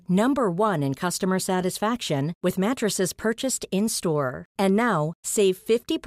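From 1.16 s onward, channel delay (comb filtering): one channel lags about one sample, so the mono sum cancels near 20 kHz, dulling the top end.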